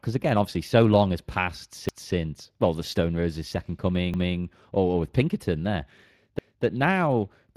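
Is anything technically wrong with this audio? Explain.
Yes. Speex codec damage runs throughout: too few bits for the excitation make the speech hoarse and noisy, which fits a bitrate near 22 kbps, and a spectrogram shows nothing above 15.3 kHz.

Overlapping chunks occur at 1.89–2.14 s, 4.14–4.39 s and 6.39–6.64 s. Each 2-second chunk starts 250 ms early, so that stretch plays twice. It is heard as a stutter, and the waveform shows a visible discontinuity at each join.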